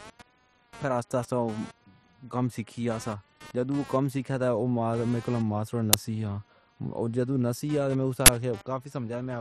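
Computer activity noise runs under the speech from start to end. Processor or peripheral load is moving the audio ground. It is heard as a buzzing chirp pulsing near 200 times a second, roughly 25 dB below the speech.

An uninitialised buffer bursts out at 5.93 s, lasting about 6 ms. A second one runs from 8.26 to 8.28 s, about 23 ms. Stale memory was played as audio. The first is heard as a loud crack, the longer second one as a burst of digital noise. The lengths fit blocks of 256 and 1024 samples.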